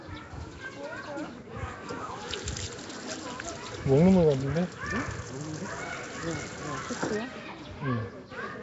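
Everyday sound, and the whole clip carries plainly audible coding damage. Nothing reaches above about 7.7 kHz, so the top end is dull and closed off. The sound has a rough, hissy halo and a smeared, underwater quality. The likely cause is Nellymoser compression, the old Flash microphone codec. It spends a fixed, small budget on each short block. Weak bands get no bits and are filled with noise. The damage fits a rate near 32 kbps.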